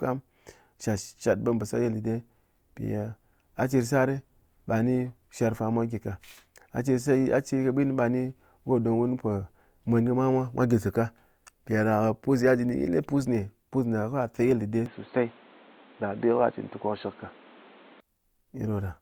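Input switched to a poorer device, 14.86 to 18.00 s: the speech abruptly dulls, with nothing above 4.3 kHz and a new noise floor about 30 dB down, likely from a change to a narrower-band microphone.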